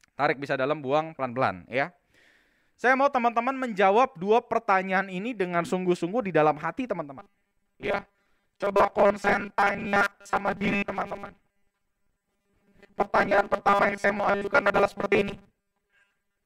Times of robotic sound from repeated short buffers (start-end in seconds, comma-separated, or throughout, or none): 7.19-16.45